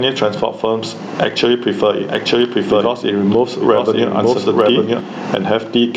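A speech recording with gain pumping throughout: the gain swings by roughly 15 dB. Unlike a noise gate, which cuts the gaps to silence, loud and soft passages sit squashed close together. The likely cause is input gain set far too high, with a fast limiter or compressor clamping down on each peak. From 2.08 s to 5.00 s there is also a doubled audio track: a full-band copy of the speech runs about a second behind the original, some 5 dB quieter, and it switches on and off abruptly at those points. What separates it from an echo or reverb tail is that the copy has no decay and no added room colour, just a clean, steady duplicate. It is likely caused by a second, slower capture path or an edit that left two out-of-step copies mixed together.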